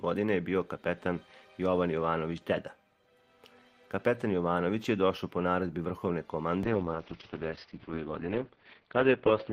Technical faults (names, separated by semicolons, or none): call bitrate drop